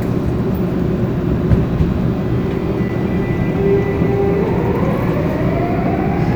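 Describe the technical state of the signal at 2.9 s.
At 2.89 s there is an underrun with held sample lasting about 5.8 ms, a length that fits a 256-sample buffer. The output ran dry and the converter froze on its last value, so the waveform flattens instead of falling to zero. That distinguishes it from a zero-filled dropout, which drops to silence and clicks on entry. Since essentially nothing was lost, the audio resumes where it paused, and the join is soft.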